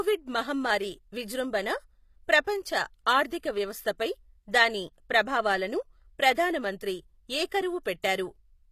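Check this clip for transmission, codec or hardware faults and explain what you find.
One codec fault runs through the whole clip. Sibilants in the speech sound gritty and metallic, the treble is synthetic, and nothing sounds above 15 kHz. This is likely HE-AAC compression: the treble is rebuilt by copying lower bands upward, which fits a low bitrate around 24 kbps.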